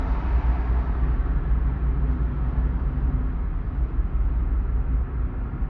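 Listening through these everyday sounds, nothing stood out as a technical problem.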